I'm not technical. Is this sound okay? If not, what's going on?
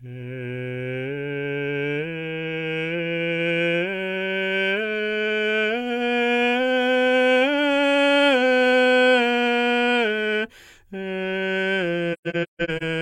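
No. Near the end of the music, between 12.13 and 12.83 s, the sound drops out several times in soft gaps. This is AAC frame loss with muting: chunks of compressed audio went missing, and the player filled each with silence, fading smoothly around it.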